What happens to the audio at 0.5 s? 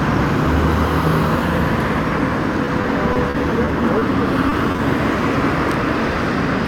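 Nothing goes wrong at 0.5 s; the sound plays through that moment intact, with no dropout, click or distortion.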